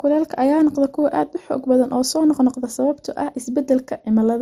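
Throughout the speech, nothing sounds above 15.7 kHz, and two kinds of compression artefacts overlap. This points to likely transcoding between lossy codecs, MP3 then Opus.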